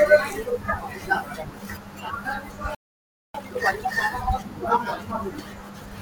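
At 2.75 s the speech just cuts out and sits silent until 3.35 s, about 0.6 s of nothing. That's a playback stall: the player most likely ran dry of buffered data or had its thread held up, so output simply stopped until it recovered.

Straight after, from 3.35 to 3.93 s, you get time-compressed catch-up. The player clears its backlog by snipping out small chunks and cross-fading the rest, so the speech runs at double speed but keeps its normal pitch.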